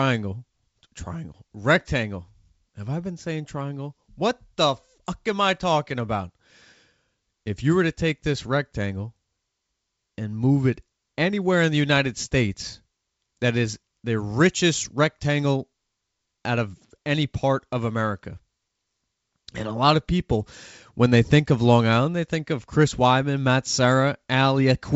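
No technical fault can be heard in this speech clip. It has passed through G.722 wideband telephone coding at 64 kbit/s, which keeps the speech clear up to about 7 kHz, with any trace of the coding faint at most.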